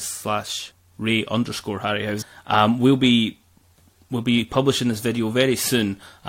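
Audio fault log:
2.21–2.23 s, damaged data in a compressed stream: corrupted frame bytes throw the decoder out of sync, producing a brief chirp, squawk, click or short hole in the speech while it searches for the next valid frame header.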